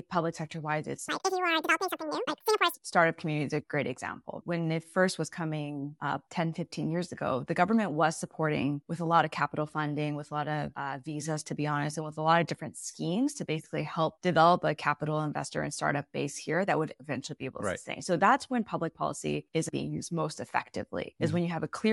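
From 1.09 to 2.74 s the speech jumps into a wrong sample rate fault. The samples are being clocked out twice as fast as they were captured, with no conversion in between. Speed and pitch rise together. The speech runs at 2.0 times normal speed and sits 12 semitones higher, a full octave. It gives a chipmunk-like quality. The exact doubling fits 24 kHz audio played back at 48 kHz.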